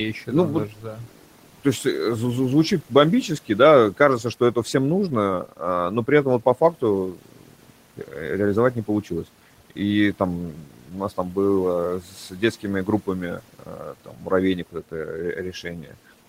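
From 0.69 to 1.85 s, just before "э звучит бомбически да", the noise suppressor cuts into the speech for about half a second, turning it down by up to about 13 dB so it sounds swallowed. It happens again at 3.97–4.74 s after that phrase (about 8 dB), at 6.73–8.14 s after "при этом вот по", then at 10.52–11.37, 12.0–14.31 and 14.72–15.97 s (about 12–13 dB), mistaking quiet speech for the room noise sitting about 23 dB below. Spectrograms show speech energy thinning into the noise floor; waveforms show dipped envelopes.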